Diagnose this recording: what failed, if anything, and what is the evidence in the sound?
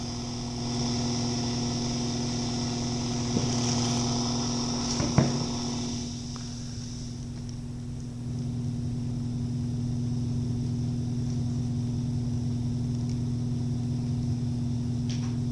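Nothing failed; no fault is audible anywhere.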